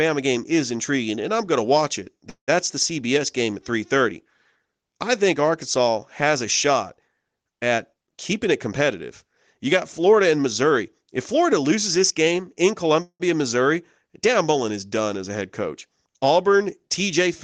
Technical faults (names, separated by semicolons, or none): call audio freeze; jitter buffer speed-up